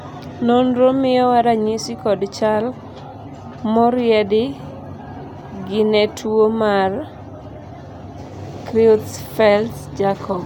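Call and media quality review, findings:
Nothing to flag here: the speech comes through steady and intact the whole way, with no audible problems worth a ticket.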